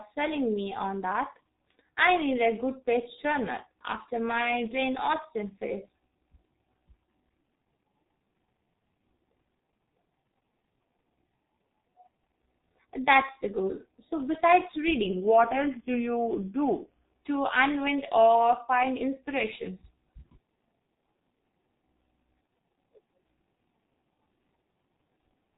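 The whole speech clip sounds muffled and hoarse, with consonants smeared and no brightness, because nothing above 3.8 kHz survives. This is heavy G.723.1 codec damage. The speech is squeezed into long 30 ms frames with a slowly updated voice model, which fits a very low rate near 6.3 kbit/s. The detail between frames is lost.

From 15.06 s to 17.04 s, just before "to unwind or find", the speech sags a full semitone (100 cents) flat and slows by about 5.6 percent. It then snaps back to normal pitch and pace. This is likely a drift correction step: clock-matching software dropped the playback rate in a single jump to refill its buffer, so speed and pitch fell together until it switched back.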